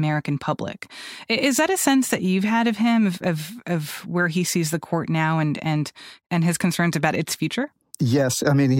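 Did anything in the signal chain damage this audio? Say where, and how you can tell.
No, nothing along the chain seems to have harmed this speech recording; I couldn't find any point where a stage left its mark on the sound.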